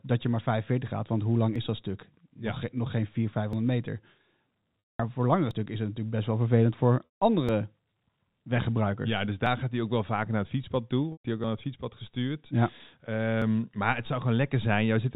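At 1.56 s a brief skip occurs, with no silence where the sound jumps forward. It recurs at 3.53 s. These are audio missing between chunks, most likely from a recorder or processor dropping around 20 ms each time it closes one 2-second block and opens the next. The two sides are butted together, so a waveform shows an abrupt discontinuity with no flat gap, and a spectrogram shows a thin vertical seam where the harmonic tracks jump.

From 4.81 s, just before "voor langere stukken is", about 200 ms is lost to packet loss with pitch repetition. The receiver loops the last pitch period and fades it out, so the sound turns into a held, buzzy tone that dies away before speech returns with a short cross-fade. On a spectrogram the harmonics run perfectly flat and steady, then thin into a gap. The waveform shows identical repeating cycles with a shrinking envelope.

Another chunk skip follows at 5.51 s. 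A second concealment starts at 7.05 s and covers about 160 ms with the same frozen, fading buzz. A skip lands at 7.49 s, and another at 9.46 s, just before "gaat hij ook wel". The third concealment begins at 11.12 s and spans about 120 ms, a shorter held tone. Skips then fall at 11.44 s, between "hij ook" and "het fietspad gestuurd", and at 13.42 s. The skips keep their steady 2-second spacing throughout. Behind all of this sits the telephone-band G.711 coding, with nothing above 4 kHz on the spectrogram.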